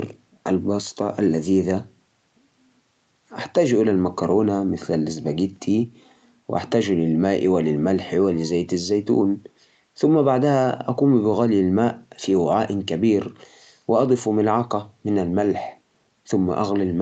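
No technical faults can be heard in the speech, which carries the ordinary sound of a call path, with nothing above about 8 kHz, consistent with a wideband call codec and normal microphone processing.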